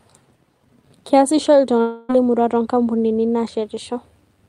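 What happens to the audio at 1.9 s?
From 1.81 to 2.11 s, the last sound stretches into a fading buzz. About 0.28 s is then skipped. This is likely a long network dropout.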